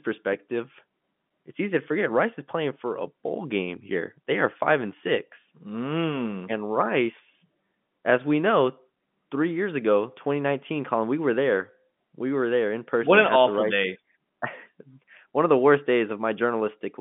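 No technical faults can be heard in the speech, which carries the narrow band of an ordinary G.711 mu-law phone line, running from about 150 Hz to 3.5 kHz with nothing above 3.7 kHz, consistent with a 64 kbps telephone channel.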